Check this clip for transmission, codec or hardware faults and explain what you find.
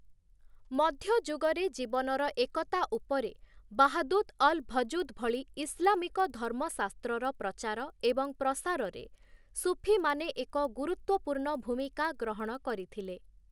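A resampler restarted on every block runs through the whole speech clip. Each 50 ms block was converted from 24 kHz to 48 kHz without its neighbours' samples, leaving an error at every edge. This produces a 20 Hz ticking buzz during speech, shown as thin vertical spectrogram lines every 50 ms and small waveform steps at block boundaries.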